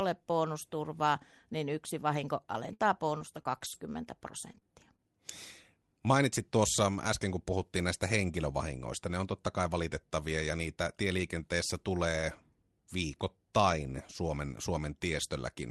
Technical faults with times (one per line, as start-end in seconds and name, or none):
2.65-3.76 repeated packet loss (robotic sound)
4.52-4.65 short concealed packet loss
4.54 lost packet rebuilt from error correction